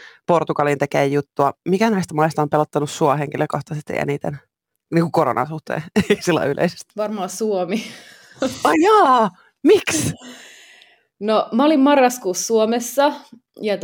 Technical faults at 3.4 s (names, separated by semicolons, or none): sample clock jitter